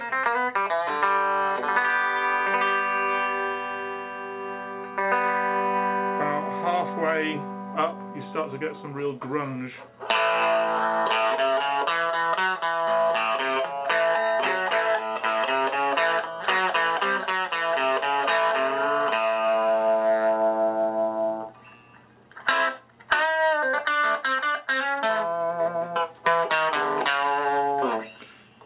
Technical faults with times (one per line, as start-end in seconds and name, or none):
none